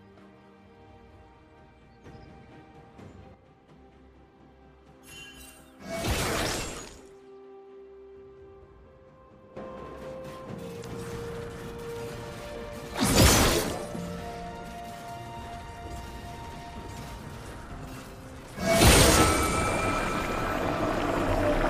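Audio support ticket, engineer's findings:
Abrupt level step up at 2.04 s, sound and background noise rising together by about 6 dB, then dropping back at 3.34 s. Sudden gain jump, likely a gain setting or bit shift applied between adjacent samples with no ramp.

Second step up at 9.57 s, about 11 dB louder, holding to the end of the clip. Same symptom: sudden gain jump, likely an unramped digital gain change.

Short glitch at 10.80–10.85 s. Damaged data in the compressed stream: bytes lost or overwritten. Decoder misreads the affected frames, loses sync and jumps ahead to the next valid frame header.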